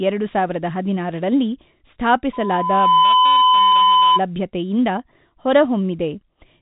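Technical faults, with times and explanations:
2.33 to 4.21 s, loudspeaker feedback squeal: a 1 kHz tone swells over roughly 0.7 s to a few dB above the speech, growing by itself in a loop rather than starting abruptly.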